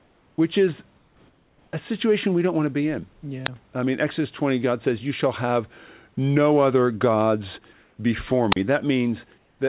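Speech, heard through a narrowband call path with nothing above 4 kHz. In the pauses at 0.0–0.38 s, 0.98–1.73 s, 7.73–7.97 s and 9.38–9.59 s, the quiet room background, sitting about 40 dB below the loudest speech, turns into a flat, featureless hiss. It is about 3, 2, 1 and 3 dB off the surrounding level, quieter in all but the third pause, where it is slightly louder. This is likely comfort noise in place of the background: the sending side stops transmitting when it detects no speech, and the receiver fills the gap with synthetic noise shaped only roughly like the real room. Twice, at 3.44–3.49 s and 8.51–8.56 s, a brief burst of static gives way to a hole of near silence, about 14 ms and 38 ms long, before the sound returns. That is a wireless microphone squelch dropout, where the FM radio signal fades far enough that the receiver's squelch mutes the output until reception recovers.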